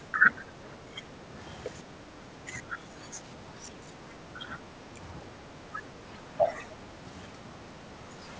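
Speech sinks in four stretches: 0.00 to 1.37 s, 1.83 to 5.02 s, 5.22 to 7.10 s and 7.30 to 8.26 s. Drops reach about 10 dB, and about 5 dB in the last. This is likely speech suppressed in double talk. The echo canceller turned the talker down along with the far-end echo.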